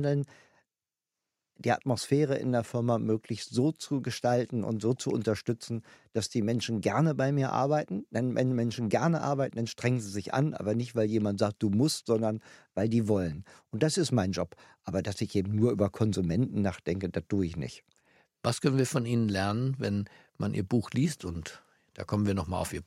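No faults can be heard anywhere in the recording.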